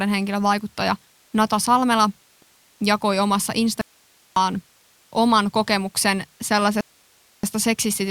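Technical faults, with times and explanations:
2.42–2.81 s and 6.81–7.43 s: rebuffering stall. The speech halts into silence, then resumes exactly where it stopped. Nothing is skipped. The player ran out of downloaded audio and waited for more, adding 385 ms and then 626 ms.
3.81–4.36 s: audio dropout to a faint residue. The speech cuts out abruptly for 550 ms, leaving only hiss about 35 dB below it. It is not a pause or fade. The wanted signal was likely lost while the path after the break stayed live.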